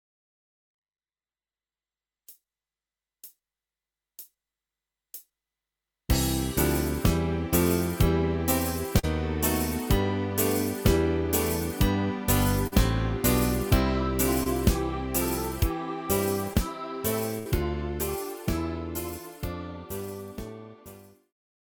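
Short concealed packet loss at 8.99 to 9.05 s, 12.67 to 12.74 s, 14.44 to 14.48 s and 16.54 to 16.57 s: between 20 and 40 ms of audio each time arrived too late and was patched by extending the preceding sound, leaving brief smears or wobbles.

A burst of packet loss at 17.39 to 17.47 s: about 60 ms went missing together, and the receiver stretched and faded the last sound over 64 ms before the audio resumed further on.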